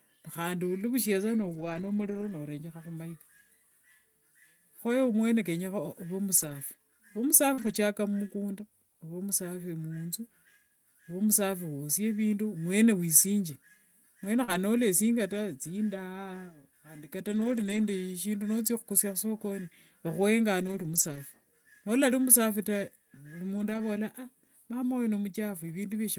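From 1.37 to 2.31 s, then 6.37–6.55 s, 7.57–7.75 s, 14.48–14.54 s, 17.32–17.86 s just after "khandi kata", 20.60–21.18 s and 23.58–23.80 s, there are lost packets rebuilt from error correction. The decoder played the low-bitrate copies carried in the following packets, so nothing drops out, but those stretches sound rougher and noisier. On a spectrogram they show a grainier noise floor with blurred detail.

At 7.53–7.59 s and 14.43–14.50 s, each just before a rebuilt stretch, there is a short concealed packet loss. About 40 ms never arrived, so the receiver extended the preceding sound and blended back, giving a brief smear or wobble.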